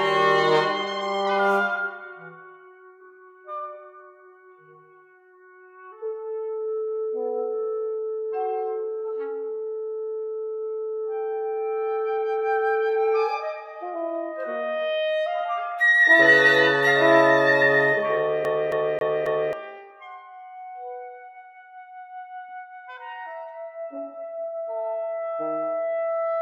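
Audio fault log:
18.45 to 19.53 s, CD stuck on one turn: the same 0.27 s section repeats four times with a brief mute at each jump, giving a fast, even skipping-disc stutter.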